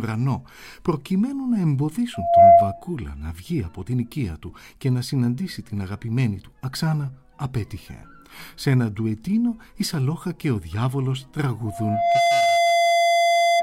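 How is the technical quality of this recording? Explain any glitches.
The recording has loudspeaker feedback squeal twice: a strong burst from 2.14 to 2.82 s, roughly 15 dB above the sound, and a weaker one from 11.66 s through the end. Each time the microphone re-catches its speaker until a 686 Hz tone runs away, swelling within a fraction of a second into a piercing whistle.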